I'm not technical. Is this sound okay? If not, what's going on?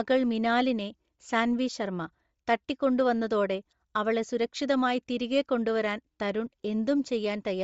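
No. Throughout, the speech sounds breathy and grainy, with a thin, fizzy top. This is likely Bluetooth LC3 compression squeezing the audio hard.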